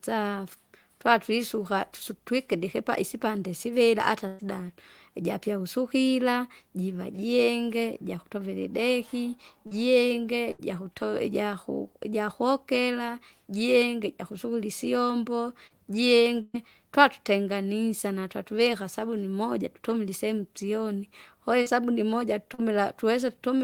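Right after "isipande sivira hata", from 4.27 to 4.42 s, the speech stretches into a held, fading tone and then jumps ahead. This is a burst of packet loss: about 120 ms never arrived, and the receiver extended the last sound to cover it. At 9.67 to 9.74 s a brief smear passes over the speech. It is short concealed packet loss, where roughly 40 ms went missing and was filled in from the sound just before. From 10.51 to 10.62 s another burst of packet loss causes a held, decaying sound, followed by a skip where about 80 ms of speech is gone. After "ijakokera jienge jukusukira isyombo", at 15.67 to 15.73 s, a quick wobble marks another short concealed packet loss of about 40 ms. From 16.42 to 16.57 s, just before "twatutenganisa natwavika sabuni moja", the sound hangs and fades, with a brief moment of silence, and the speech resumes further on. This burst of packet loss removed about 120 ms. 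Two final brief smears at 21.62 to 21.69 s and 22.54 to 22.61 s are short concealed packet losses, each patching a gap of about 40 ms.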